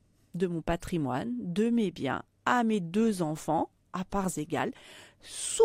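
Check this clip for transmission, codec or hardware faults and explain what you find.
No fault turns up anywhere in this speech recording. There is nothing to report on the transmission path, the encoding or the hardware.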